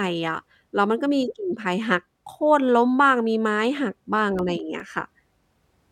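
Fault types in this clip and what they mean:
CD scratch ticks: a disc blemish defeats error correction each rotation, giving nine regular clicks, the longest about 3 ms, from 3.77 to 5.42 s, seen as thin vertical spikes.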